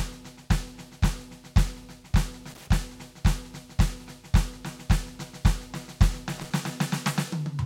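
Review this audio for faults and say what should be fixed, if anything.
Loose connector crackle breaks into the music twice, from 2.50 to 2.68 s and from 6.37 to 6.51 s. A worn or dirty contact in the signal path makes and breaks many times in quick succession as it shifts, chopping the music into a rapid, irregular scratching burst. Unlike a single buffer click or a steady dropout pattern, each burst is an uneven cluster that starts and stops abruptly. Clean or replace the suspect plugs and cables, and secure them so they cannot move during recording.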